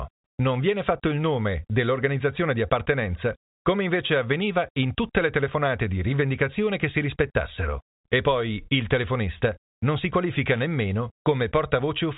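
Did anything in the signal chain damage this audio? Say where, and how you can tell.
No, nothing in the chain damaged this speech; the G.711 telephone coding works as that format should, cutting everything above about 3.8 kHz, with its quantisation noise sitting faintly under the signal.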